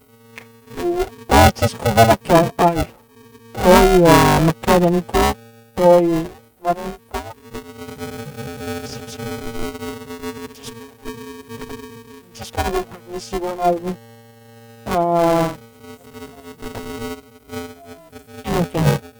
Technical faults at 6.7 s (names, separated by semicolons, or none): buffer tearing